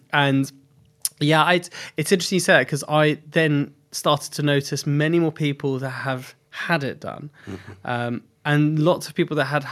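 Speech recording with no audible technical faults.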